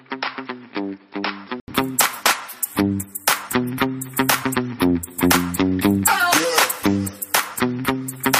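From the start to 1.68 s the audio sounds dull and boxy, with nothing above 5.4 kHz. It sits roughly 10 dB quieter, over background noise roughly 35 dB below it. An 80 ms gap then precedes fuller sound. This is likely an input switched from a poorer device.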